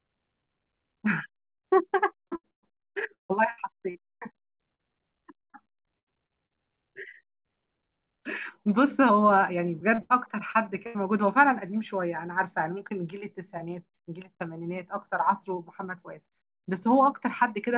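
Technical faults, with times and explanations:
1.56–1.67 s, burst of packet loss: A short run of packets never arrived in time. The receiver stretched the last sound for about 75 ms while fading it, then jumped ahead, so roughly 80 ms of the speech is simply gone after a brief fill.
2.28–6.53 s, repeated packet loss (robotic sound): Packets kept dropping, leaving 14 gaps (the longest 154 ms) that were patched by extending the preceding sound. About a fifth of this stretch is synthetic fill, giving choppy speech with pieces missing, on top of the call codec's band limit at 4 kHz.
9.94–10.98 s, repeated packet loss (robotic sound): A second bout of loss left 4 gaps of up to 80 ms, each bridged by repeating the last fragment. Nearly a quarter of this second is concealed, so the speech turns briefly choppy and clipped.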